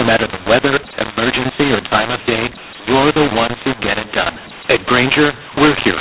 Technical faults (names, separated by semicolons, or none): mu-law and A-law mixed up